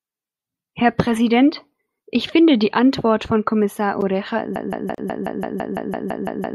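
At 4.56 s the speech turns into a broken-record loop. The same 168 ms snippet plays back to back, twelve times, right to the end. Something upstream likely stalled and kept resending its last chunk, so whatever came next is simply gone.

Inside that loop, at 4.95 s, there's a gap at a join of encoded pieces: a 34 ms hole with softened edges. It fits two separately encoded segments butted together without trimming the encoder's start delay and end padding.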